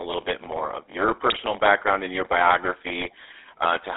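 Throughout, a block size mismatch (padded) leaves a zero-filled gap in each 512-sample read. That makes a steady 93.8 Hz buzz, and the speech runs at 0.938 speed, near normal pitch.

The GSM full-rate codec is plainly audible for the whole clip, which fits 13 kbps. The line band is 300 Hz to 3.7 kHz, and the voice sounds buzzy and gravelly.

From 1.30 to 1.43 s, then from 3.00 to 3.11 s, GSM bit errors corrupt the decoder's filter, pitch and gain values. Each burst squawks and gargles, which fits about five damaged frames.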